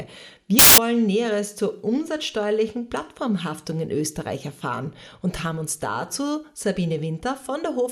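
From 0.59 to 0.78 s, samples built from the wrong bytes burst out as loud, harsh broadband noise. The reader misassembled each sample, so the rapidly changing low bits became the dominant part of every value.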